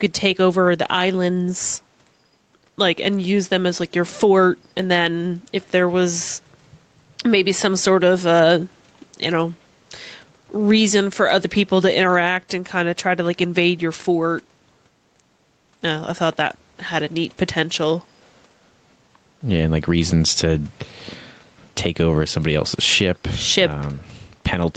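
Gain pumping runs through the whole speech clip: the gain swings by around 10 dB, so loud and quiet passages sit unnaturally close together. The likely cause is input gain set far too high, with a fast limiter clamping down on each loud sound. On a waveform the envelope looks flattened.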